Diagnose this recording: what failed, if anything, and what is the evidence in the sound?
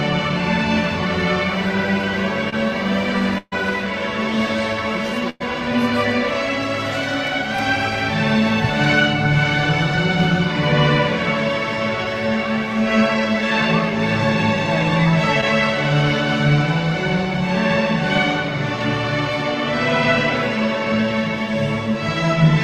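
The network path failed, with short concealed packet loss at 2.49 to 2.54 s and at 15.41 to 15.44 s. At each point about 20 ms of audio never arrived in time, and the receiver extended the preceding sound to cover it. It filled 26 ms at 2.49 s and 11 ms at 15.41 s before blending back in. The result is a brief smear or wobble rather than a hard digital dropout or click, because the gap is filled, not silent or truncated.

There are also bursts of packet loss at 3.38 to 3.54 s and 5.30 to 5.42 s, losses of about 140 ms and 100 ms. Here the concealment had to stretch much further, 136 ms and 105 ms, so the continued sound decays into a held buzz or fading hiss. At 3.38 s it ends in about 30 ms of silence. The audio then resumes past a missing stretch. The long fading fill and the skipped material are what set these apart from the brief smears above.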